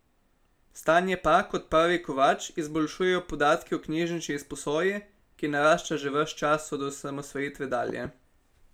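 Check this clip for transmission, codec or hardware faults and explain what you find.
One fault shows up, near the end of the speech. From 7.90 to 8.08 s there is a loud pop: a sudden voltage step or pulse, likely from a plug, switch, static discharge or driver glitch, was added to the signal, and the following circuitry shaped it into a brief transient. It is heard as two sharp pops in quick succession, peaking a little above the speech level, while the speech continues underneath without a break.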